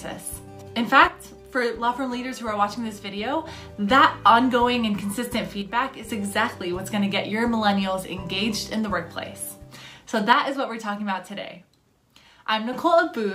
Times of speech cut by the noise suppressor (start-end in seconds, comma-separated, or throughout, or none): none